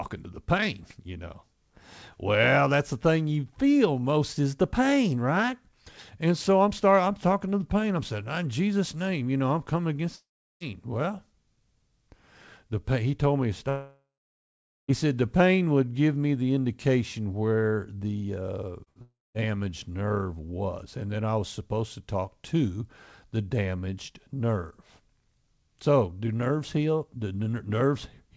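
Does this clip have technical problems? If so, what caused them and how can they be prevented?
Yes. Long network dropout, at 10.16 to 10.63 s just after "know I'm coming against", at 13.69 to 14.91 s, and at 19.02 to 19.37 s, ending before "nerve was and then": the audio stops and the last sound is stretched into a fading buzz, then silence, before resuming further on with the gap missing. The longest hole is about 1.2 s, with 0.82 s of silence. An interrupted network stream is the likely cause. A wired connection or a less congested link would prevent this.

Short concealed packet loss, at 18.84 to 18.89 s just after "indication where the uh": about 30 ms never arrived, and the decoder covered it by extending the preceding sound and blending back in, heard as a brief smear or wobble. A slightly deeper jitter buffer would let late packets arrive in time.

Burst of packet loss, at 18.89 to 18.99 s, right after that: roughly 60 ms in a row was lost, so the receiver held the last sound and let it fade before the audio resumed. 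Forward error correction or redundant packets would help prevent it.

This cluster around 18.8 to 19.4 s runs straight into the third dropout. The call path itself, a G.722 codec at 64 kbps, leaves nothing above 8 kHz.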